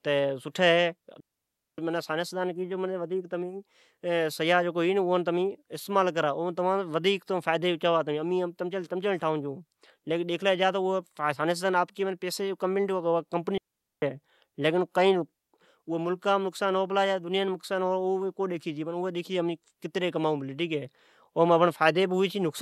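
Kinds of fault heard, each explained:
Digital wireless dropout: the speech cuts out twice into clean near silence, from 1.20 to 1.78 s for about 0.58 s and from 13.58 to 14.02 s for about 0.44 s, each hole starting and ending with only a very brief fade and no crackle or noise burst around it. This is a digital radio link losing too much data, so the receiver mutes its output until enough data arrives again.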